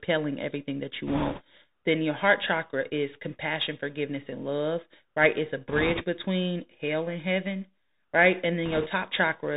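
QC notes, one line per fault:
Throughout: Bluetooth CVSD headset codec; nothing above 4 kHz, scratchy s sounds and a steady granular hiss from one-bit slope tracking, which fits a 64 kbps link.
1.07–1.42 s, 5.68–6.03 s, 8.66–8.88 s: bit errors on a Bluetooth voice link; bursts of rushing crackle, worst in the first, with no loud clicks because each flipped bit is one small, quickly decaying step.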